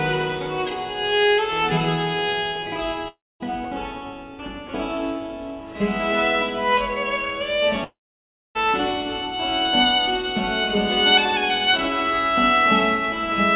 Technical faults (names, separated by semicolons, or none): long network dropout